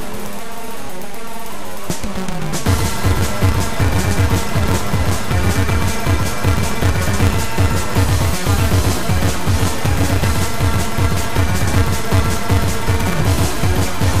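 Throughout, one stage writes longer blocks than the next reads, and each block's tail is dropped: a block size mismatch (truncated), consistent with a 256-sample read. The cuts leave a steady 188 Hz buzz, and the sound runs 1.88 times fast at roughly normal pitch.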